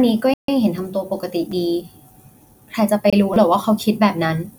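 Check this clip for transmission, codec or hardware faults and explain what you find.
Two kinds of fault turn up in this speech clip: two dropouts and two stutters.

Bluetooth stall, 0.34 to 0.49 s and 3.10 to 3.13 s: the wireless buffer likely ran dry while delayed packets were resent, so the sound cuts to silence for 146 ms and then 25 ms before resuming.

Repeated buffer, 1.52 s and 3.34 to 3.36 s: fresh audio arrived late and the device replayed its last 5.8 ms block, which fits a 256-sample buffer. It played once more at 1.52 s, a brief click costing about 5 ms, and four more times at 3.34 s, a short buzz costing about 20 ms.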